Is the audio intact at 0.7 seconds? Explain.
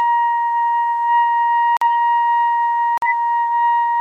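Yes, the audio at 0.7 s is intact, with no dropout, click, distortion or other fault in the sound at that moment.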